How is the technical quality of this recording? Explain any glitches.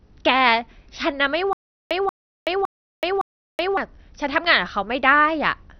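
The technical quality is poor, with two faults.

Throughout, the speech sounds dull and gurgling, with nothing above 6.2 kHz. This is likely MP2 compression, which shuts off starved upper sub-bands, and the sound points to a low bitrate near 48 kbps.

From 1.53 to 3.77 s there is a stutter with silent gaps. A 0.18 s burst repeats four times, separated by about 0.38 s of digital silence. The likely cause is a stalled stream replaying its last fragment.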